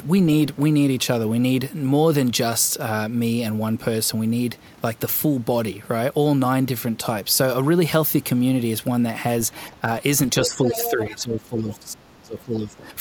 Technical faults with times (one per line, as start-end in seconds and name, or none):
10.42-12.89 speech suppressed in double talk
10.44-11.17 other side's voice leaking through
11.71-11.75 other side's voice leaking through
12.39-12.43 other side's voice leaking through